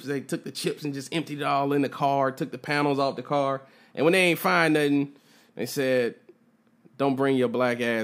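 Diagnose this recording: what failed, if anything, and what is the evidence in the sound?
Nothing in this speech recording points to a failure.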